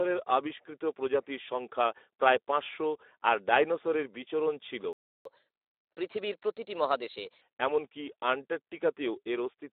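Speech here passes through a low-rate Speex codec, consistent with about 11 kbps, so the voice sounds hoarse and noisy, confined to roughly 300 Hz to 3.6 kHz. Right after "আর ডাইনোসরের বিচরণ ছিল", the player most likely ran out of data, a playback stall that silences the sound from 4.93 s to 5.25 s, about 0.32 s. It then drains its backlog through catch-up at higher speed, running 1.15 times fast from 5.25 s to 7.41 s, so speech hurries along roughly two semitones high before settling back.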